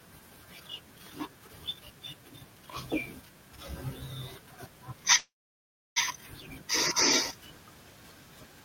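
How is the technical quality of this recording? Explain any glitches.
The recording has one clear glitch in the speech. A call audio freeze runs from 5.17 to 5.98 s: the last sound briefly trails off, about 0.68 s of silence follows, and the speech resumes with nothing lost, likely from delayed packets emptying the jitter buffer.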